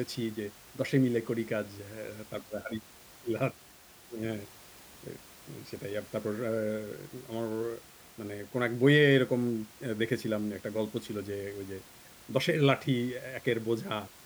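No technical faults are audible.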